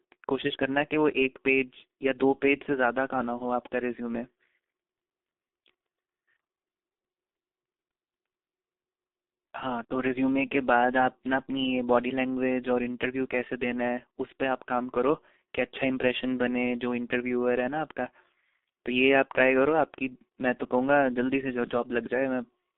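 Throughout the speech, the signal carries the marks of the G.723.1 codec. Its long frames and low rate, which fit roughly 6 kbit/s, leave heavy damage. The band runs only from 250 Hz to 3.6 kHz, so the voice sounds muffled and hoarse, with smeared consonants.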